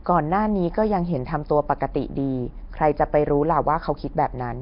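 Nellymoser compression runs through the whole speech clip, from the first second to the last. The likely cause is the old Flash microphone codec, Nellymoser Asao, coding short blocks at a fixed low bit budget. The damage is heavy. Nothing survives above 5.3 kHz, which fits a rate near 22 kbps. Weak bands receive no bits and are replaced with noise, so the speech carries a rough, hissy halo and a smeared, underwater blur.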